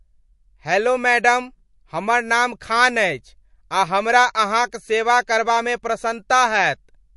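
From start to end the speech has nothing above 11.3 kHz and a plainly audible watery swirl on s sounds, likely MP3 compression at a rate fitting about 48 kbps. Weak frequency lines flicker between frames, which a plain low-pass filter would not cause.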